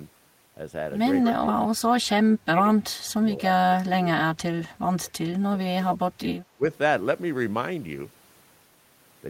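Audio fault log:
1.22–2.03 s, 2.21–2.82 s, 3.20–4.08 s, 4.34–6.06 s, 6.54–6.64 s: speech suppressed in double talk. The speech dips by up to about 20–25 dB, likely because the echo canceller could not separate the local talker from the overlapping far-end echo and attenuated both.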